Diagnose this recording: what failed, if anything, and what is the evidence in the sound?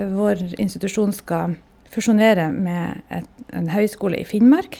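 Nothing in the recording points to a failure at any stage of the chain. The speech carries no audible evidence of a fault.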